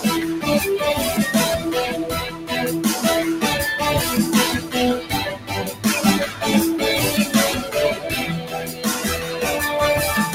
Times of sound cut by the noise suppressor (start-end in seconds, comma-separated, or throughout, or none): 2.28-2.51, 4.59-4.74, 5.35-5.85, 8.41-8.85